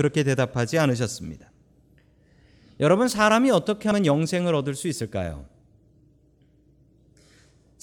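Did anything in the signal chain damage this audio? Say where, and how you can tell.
Yes: compressed frames skipped at the codec decoder around 3.9 s. The speech jumps ahead about 70 ms, roughly three 23.2 ms frames, leaving a smeared blip rather than a hard dropout click.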